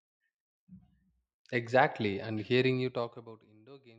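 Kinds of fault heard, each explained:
Zipper noise: a rapid ticking rides on the speech from 2.69 to 3.53 s while the level falls by roughly 25 dB. The fade moves in unsmoothed 1 dB steps, around 30 a second, and each abrupt jump leaves a small click.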